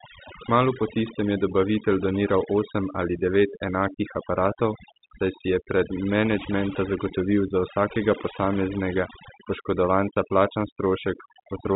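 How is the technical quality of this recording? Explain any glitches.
The recording is marred by one fault, overdone noise removal, which runs through the whole clip. Between phrases the background drops and breaks up, speckled with twinkling. A noise reduction stage was pushed too hard: wherever a frequency band came close to its estimate of the noise floor, it cut that band sharply or removed it, and quieter parts of the speech were cut along with the noise. The telephone-style G.711 coding is working as expected and simply caps the audio at about 3.8 kHz.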